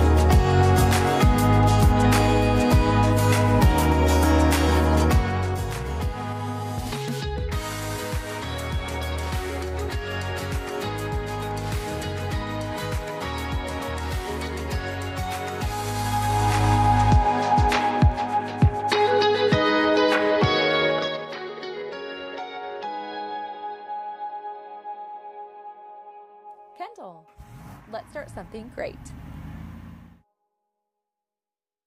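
A level drop of roughly 15 dB applied in unsmoothed 3 dB steps, about ten per second, causes zipper noise from 20.91 to 21.33 s: audible ticking clicks riding on the audio.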